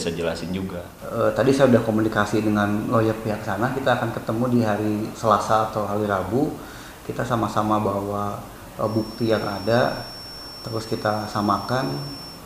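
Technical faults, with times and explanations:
8.78 to 12.45 s, feedback whistle: from here to the end a thin, steady tone at 5.4 kHz sits behind the sound, roughly 20 dB under it and wobbling a little in level. That's most likely the loudspeaker-to-microphone loop hovering right at the edge of feedback, so a single high frequency keeps ringing on its own without building into a full howl. Since it never takes off, it stays as a faint, persistent whine.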